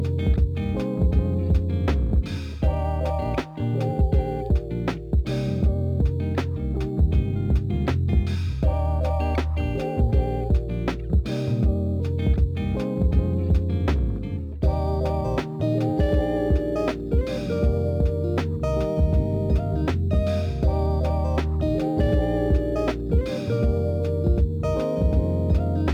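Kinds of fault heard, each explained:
Crude rate conversion: samples dropped or repeated without filtering, fitting a 48 kHz to 44.1 kHz change. A faint inharmonic fizz, about 40 dB down, runs throughout.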